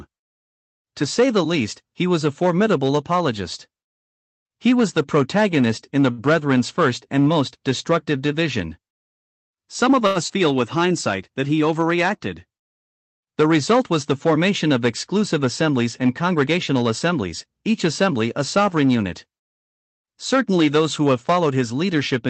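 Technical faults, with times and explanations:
6.11–6.21 s and 10.07–10.19 s, short stall from a late packet: a sound is held too long with a faint buzz or dip, after "the protagonist in the" and before "first and most destructive", then later. The jitter buffer ran dry and the last sound was stretched by 67 ms and 87 ms, with nothing lost.
10.28–10.32 s, short concealed packet loss: a brief smear or wobble where 40 ms of audio never arrived, bridged by continuing the previous sound, then blended back into the real signal.
16.29–16.58 s, jitter buffer speed-up: between "of exclusive assemblies and" and "assemblies each assembly a" the speech sounds hurried at unchanged pitch, running at 110% as roughly 40 ms of pitch periods are trimmed to shrink the buffer.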